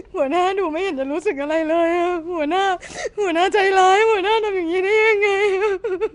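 From the very start to the end of the speech, there's a rough, hissy halo around everything and a smeared, underwater character, with nothing at all above about 10.6 kHz. That's most likely Nellymoser compression, the old Flash microphone codec: it works in short fixed blocks on a tight bit budget, so quieter bands get no bits and are filled with noise instead. The damage is plainly audible, which fits a rate around 44 kbps.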